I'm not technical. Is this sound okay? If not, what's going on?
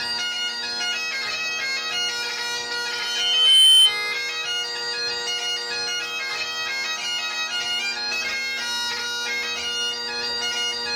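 No. From 2.90 to 3.96 s a microphone picks up its own loudspeaker, creating loudspeaker feedback squeal. The loop keeps amplifying one pitch, about 3.1 kHz, which swells over under a second into a loud, piercing whistle well above the rest of the sound.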